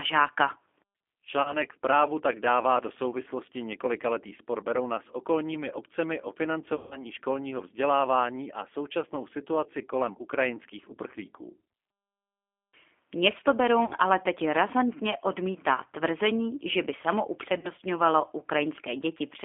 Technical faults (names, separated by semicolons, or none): G.729 codec; VoIP packet loss concealed by the speech codec